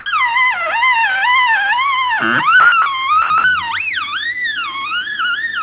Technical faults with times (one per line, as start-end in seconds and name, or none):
0.00-0.06 sound dropped by the voice detector
2.60-2.86 sound dropped by the voice detector
3.22-3.44 sound dropped by the voice detector